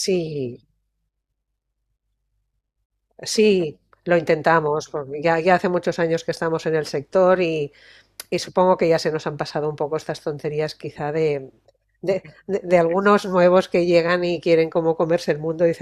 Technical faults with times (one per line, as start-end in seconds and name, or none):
none